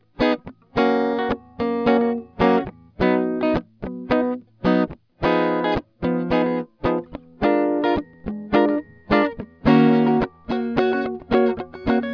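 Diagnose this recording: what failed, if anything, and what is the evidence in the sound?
Nothing in the chain failed here; the music comes through without any audible fault at any stage. There is no event at any point in the recording that would point to a problem in the wiring, conversion, processing, transmission, storage or playback.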